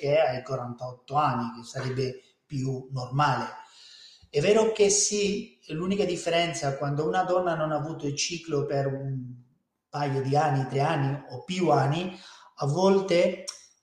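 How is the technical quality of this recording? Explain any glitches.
Nothing here trips me up technically, as there isn't a single glitch to point to anywhere in the recording.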